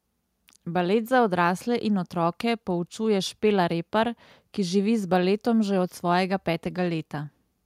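Speech, with no technical faults to report. Nothing in the recording points to a problem anywhere along the signal chain.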